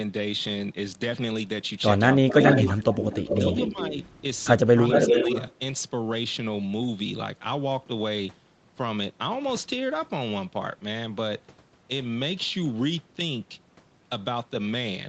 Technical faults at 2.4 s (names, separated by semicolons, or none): echo leak; speech suppressed in double talk